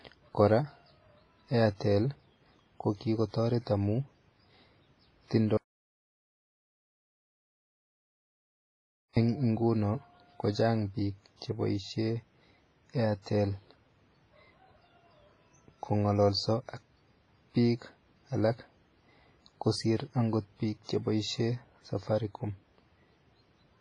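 From the start the speech has a ringing, washy quality with hiss that swells and fades along with the voice, and nothing reaches above 10.6 kHz. The damage is heavy, which points to WMA compression at a low bitrate, likely around 24 kbps, where long transform blocks smear quantisation noise over tens of milliseconds and weak components are dropped.

From 5.57 s to 9.17 s the speech cuts out abruptly into total silence for about 3.6 s, with no room tone underneath, then resumes mid-flow. This is an audio dropout to silence, likely from the input being lost while recording continued, so whatever was said in that stretch is gone.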